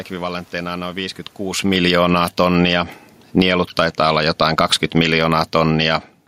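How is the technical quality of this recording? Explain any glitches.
The recording has one glitch: automatic gain falling. From 1.57 s to 5.91 s, the speech and its room noise sink together by about 13 dB. The automatic gain control judged the input too loud or its background noise too strong, and steadily lowered its gain. The change in level around one and a half seconds comes from the talker moving relative to the microphone, not from the system.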